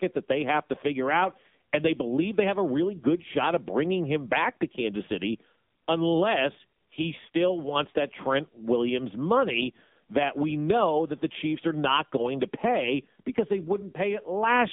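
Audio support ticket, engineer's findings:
Buzzy, synthetic, muffled speech throughout; band 150 Hz–3.6 kHz, nothing above 3.7 kHz. AMR narrowband mobile codec, heavy pulse-model damage, fits a 6.7 kbps mode.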